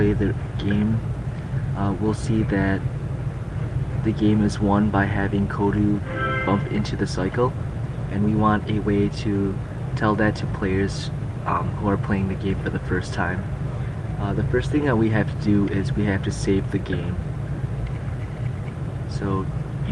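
No technical faults can be heard in this audio. It has passed through a WebRTC call path, and its top end rolls off at about 12 kHz, which fits an Opus codec running at around 40 kbps with its usual coding texture.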